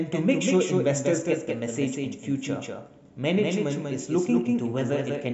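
It's a speech clip with a doubled audio track running the whole way through. A second full-band copy of the same audio trails the original by around a fifth of a second, sitting maybe 5 dB down, so every syllable gets a clean, dry repeat with no decay or room colour on it. The likely cause is the signal being picked up a second time through a slower path, or an edit that left two copies out of step.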